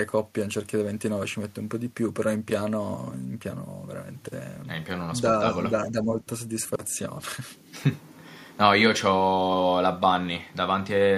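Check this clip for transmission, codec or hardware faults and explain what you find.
One fault is present in this speech clip: speech suppressed in double talk, between 5.7 and 6.12 s. Over that stretch the level drops by about 10 dB in uneven pieces, adding up to roughly a third of a second of attenuated sound. The likely cause is an echo canceller that met simultaneous talk from both ends, could not tell the near talker from the loudspeaker echo, and pulled its output down to be safe.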